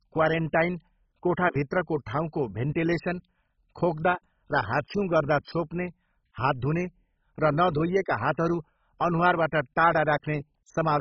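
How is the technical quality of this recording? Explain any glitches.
The technical quality is poor: the speech is heavily degraded by compression for the whole clip. Throughout, it sounds dull, with nothing above 7.5 kHz and a gurgling, granular roughness, likely from MP2 compression starved of bits, consistent with a very low bitrate around 16 kbps. Upper sub-bands switch off and flicker, and the remaining bands are coarsely quantised. That flickering grit distinguishes it from a simple low-pass filter.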